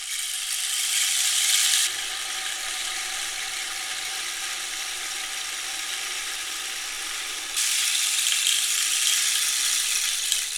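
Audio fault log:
1.87–7.57 s, de-emphasis applied wrongly: a treble-cut filter meant to reverse pre-emphasis acts on audio that never had any, or acts twice, so highs fall smoothly, about 11 dB down at 10 kHz versus 1 kHz. The sound turns dull and muffled. On a spectrogram, upper bands fade evenly across this span.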